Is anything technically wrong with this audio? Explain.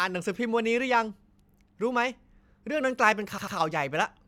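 Yes. There are repeated frames at 1.49 to 1.53 s and 3.37 to 3.55 s. A run of compressed frames was written more than once, so the decoder plays the same slice of speech again. The first event replays a 46.4 ms block once, about two frames' worth. The second replays a 92.9 ms block twice, adding 185.8 ms. Each is heard as a stutter in the speech, and the clip runs longer by the repeated time.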